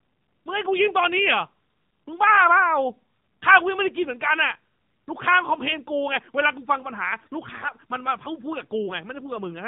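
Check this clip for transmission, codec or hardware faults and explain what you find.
Two faults are audible in this speech clip: narrowband mobile coding across the whole recording, and a short burst of corrupted frames near the end.

AMR narrowband mobile codec, throughout: the speech sounds thin, buzzy and somewhat synthetic, with nothing present above 4 kHz, and the codec damage is plainly audible. The speech was squeezed through AMR-NB at a low bit rate, likely around 7.4 kbps. At that rate the encoder's vocal-tract model and the few excitation pulses it places in each 5 ms subframe give only a coarse, artificial-sounding copy of the original.

AMR bit errors, from 7.58 to 7.72 s: for roughly a seventh of a second the speech turns hoarse, scratchy and gargly while keeping about the same pitch and loudness. That span fits a handful of consecutive 20 ms frames whose weakly protected bits were flipped on a poor radio link, at an error rate of a few percent. 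The checksum on the critical bits still passed, so the decoder accepted the frames and placed excitation pulses wrongly, with off gain and spectral values.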